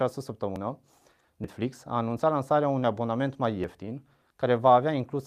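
Throughout the speech there is clock drift between sender and receiver: the sender's clock runs about 3% slow, so the receiver's jitter buffer keeps draining. On a waveform the syllable spacing gradually widens relative to the original, and the rhythm feels faintly sluggish and uneven.

From 0.03 s to 4.54 s, repeated timing corrections compensate by repeating short slices, playing back at an effective 97% speed and adding around 150 ms in total. A spectrogram shows brief duplicated frames at irregular gaps, heard as slight hiccups and a wobbly tempo.

Sudden skips forward occur at 0.56 s, 1.44 s, 2.84 s and 3.64 s, each likely a dropped buffer (overrun), where samples were overwritten before being read. Around 40 ms vanishes at the other three, about a tenth of a second at 1.44 s. The waveform shows an abrupt splice with no silence, and the spectrogram shows a vertical broadband line where the formants jump.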